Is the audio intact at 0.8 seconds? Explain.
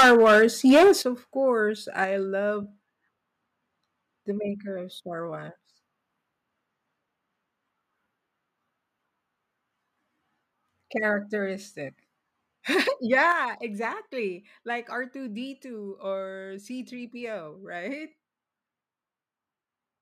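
No. At 0.8 s the speech sits inside microphone overload lasting from 0.0 to 0.92 s. Input gain was likely about 13 dB too high. The converter cut off the peak tops, around 15% of samples. The loudest syllables crackle harshly.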